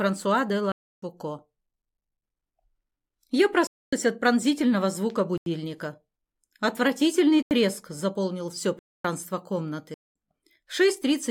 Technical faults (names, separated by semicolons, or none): block of digital silence